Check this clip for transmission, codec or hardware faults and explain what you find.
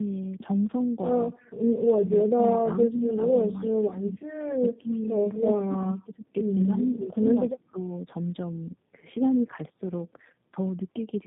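The clip shows one fault, tandem speech coding, present throughout. The speech has passed through two low-rate speech codecs in a row, likely an AMR-NB stage and then G.729A, with a G.711 link between. The second coder re-encodes the first one's errors. The result is rough, warbly and muffled, with nothing above 3.8 kHz.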